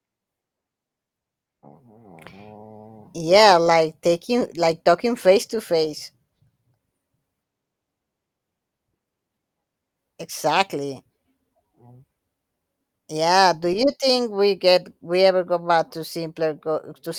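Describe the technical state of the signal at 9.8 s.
At 9.8 s the speech signal is intact, with no audible fault at that moment.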